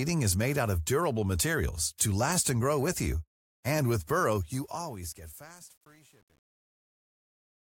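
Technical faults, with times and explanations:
4.31–7.64 s truncation distortion on a fade: from 4.91 s the fade-out turns gritty as undithered gain, which fits a 9-bit stage, leaves coarse steps.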